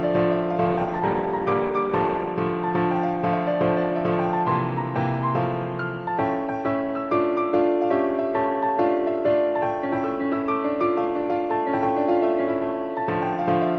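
A call bitrate drop runs from 0.67 s to 2.37 s. The call's bandwidth estimate fell and the encoder was pushed down to a much lower bit budget, consistent with a fall from around 48 kbps to roughly 17 kbps, held at its lowest for about 1.6 s. Coarser coding and a lost upper band leave the sound dull, muffled and watery until quality returns at 2.37 s.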